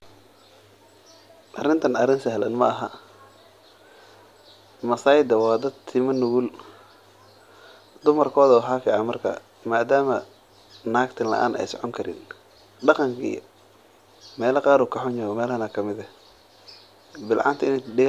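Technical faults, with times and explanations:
No technical faults can be heard in the signal at any point in this speech recording.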